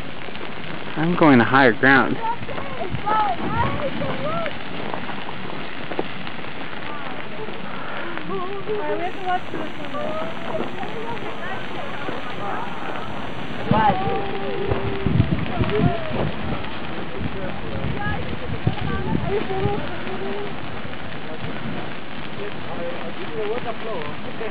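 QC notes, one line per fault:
9.03 to 13.67 s, timecode bleed. A chirping warble sits well below the sound, roughly 30 dB down. Linear timecode leaked in from a nearby line. Its square wave flips between tones near 1 kHz and 2 kHz, which fits 29.97 fps code.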